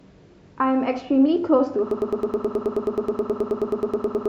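From 1.91 s to the end, the speech turns into a broken-record loop: a piece of about 106 ms repeats exactly, back to back, some 22 times. The likely cause is a stalled player, encoder or stream resending its last fragment. The repeats are identical, so it is not stutter or echo, and the audio that should have followed is lost.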